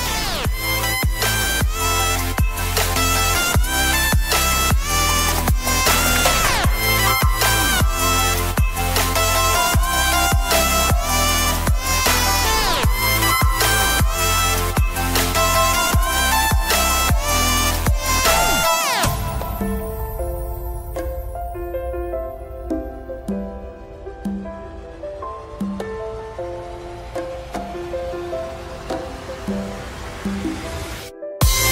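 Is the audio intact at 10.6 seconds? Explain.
Yes, the audio is intact at 10.6 seconds, with no dropout, click, distortion or other break in the signal at that point.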